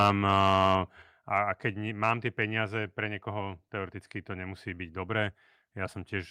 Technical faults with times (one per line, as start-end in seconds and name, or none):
0.00-0.73 microphone overload
1.02 microphone volume stepped down